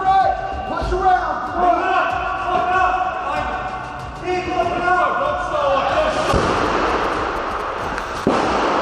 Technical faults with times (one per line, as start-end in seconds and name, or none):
6.42-7.85 GSM signalling bursts